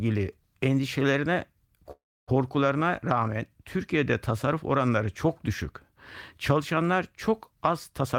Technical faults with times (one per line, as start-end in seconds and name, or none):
1.91-2.29 call audio freeze
8.01-8.18 jitter buffer speed-up